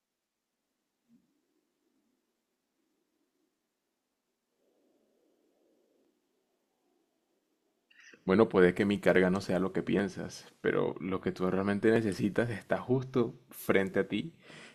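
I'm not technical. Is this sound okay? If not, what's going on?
No. From 0.14 s to 13.9 s the speech has a small click about every 1.97 s, roughly seven in all. These are clock drift buffer slips, likely from two devices whose clocks run slightly apart, so a tiny block of sound is periodically dropped or repeated.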